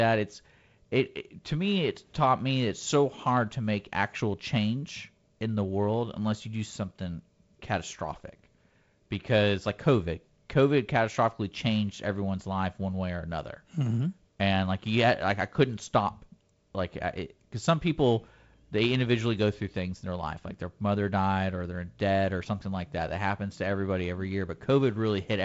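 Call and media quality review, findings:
No findings in this call and media quality review.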